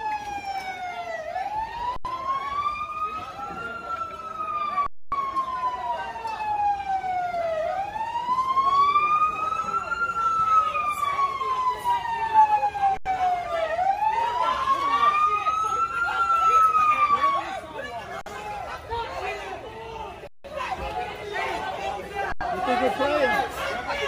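Six underruns with held sample occur at 1.96–2.05 s, 4.86–5.12 s, 12.97–13.06 s, 18.21–18.26 s, 20.27–20.44 s and 22.32–22.41 s, lasting 85, 256, 85, 49, 171 and 85 ms. Each time the output buffer ran dry and the converter held its last value, so the waveform flattens and the sound simply stops. No audio is lost, so playback resumes where it paused, with only a soft edge. The 85 ms gaps fit a 4096-sample buffer at 48 kHz.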